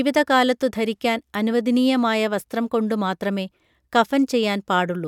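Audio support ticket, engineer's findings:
No audible defect found in the speech signal on review, so nothing on this ticket needs action.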